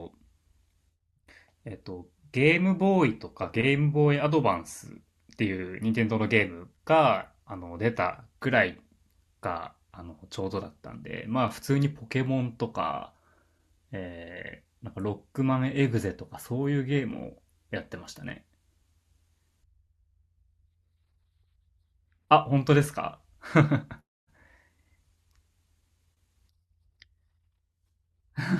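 No technical faults can be heard anywhere in this recording.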